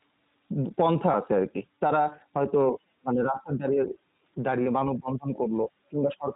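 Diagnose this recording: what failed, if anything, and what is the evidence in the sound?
Codec stage: the whole speech clip is band-limited below 4 kHz with a rough, synthetic edge, which fits the iLBC codec in its 15.2 kbps, 20 ms-frame mode.

Network stage: lost iLBC frames at 1.12–1.16 s and 4.64–4.68 s. Each gap is a short buzzy held vowel from repeated pitch cycles, then the speech snaps straight back.

Call processing: the voice dips by about 15 dB at 3.01–3.91 s and 4.85–5.7 s, and by about 20 dB at 5.9–6.35 s. That's likely speech suppressed in double talk, with the echo canceller ducking the talker.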